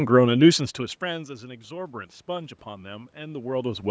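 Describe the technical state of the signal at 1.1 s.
At 1.1 s the automatic gain control is raising its gain, about 6 dB from 1.0 s to the end, after the input fell about 18 dB, so voice and background swell together.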